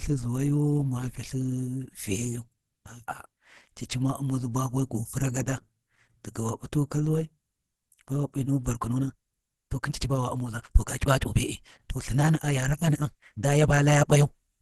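Throughout the speech, the audio was likely squeezed through Opus compression at a very low rate, with damage that fits around 16 kbps. At that rate the encoder runs in its hybrid speech mode and cuts everything above 12.1 kHz. The result is plainly audible: the voice sounds muffled and hoarse, the top end is dulled, and the texture is rough and grainy rather than clean.

From 8.73 s to the end, a time-stretched section takes over. Software likely squeezed this stretch to about 1.44 times its original speed, keeping the pitch by dropping short pieces of the audio. The pace suddenly jumps ahead while the voice stays at the same pitch, and the delivery sounds rushed.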